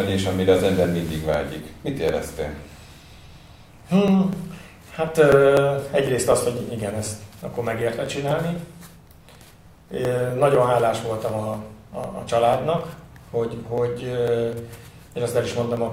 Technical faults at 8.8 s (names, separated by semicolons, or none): periodic USB or driver dropouts